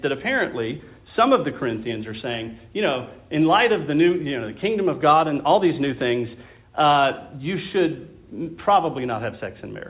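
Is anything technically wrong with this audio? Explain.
No, nothing's wrong here; it's just ordinary call audio over a G.711 A-law link at 64 kbps, which is why there's nothing above 4 kHz.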